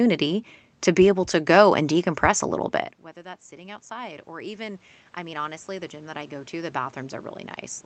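After "decompress a little bit", automatic gain rising from 3.13 to 7.35 s slowly adds about 12 dB, swelling speech and room noise together.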